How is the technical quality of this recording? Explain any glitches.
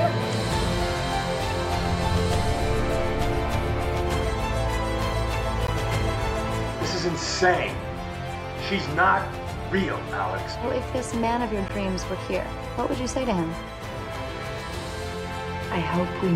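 Two short dropouts break up the sound.

At 5.67 s and 11.68 s there's a gap between chunks. The audio came through in 6-second pieces, and about 13 ms of silence sits at each join, so you hear a brief hole.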